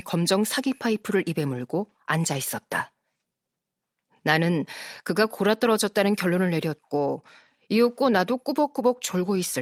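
No technical faults can be heard anywhere in the speech recording.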